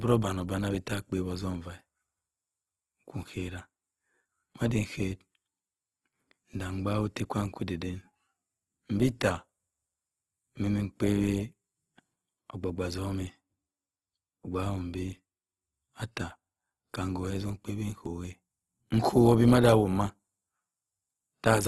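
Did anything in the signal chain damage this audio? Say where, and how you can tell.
Yes, at the codec stage, throughout the speech. The sound is grainy and rough rather than swirly, with harmonics turned into a noisy texture, and there is nothing above 12.3 kHz. This is likely Opus compression in its music (CELT) mode: with too few bits, the encoder keeps each band's energy but refills detail with folded or noise content, and the bandwidth cap and plainly audible damage fit a low rate around 16 kbps.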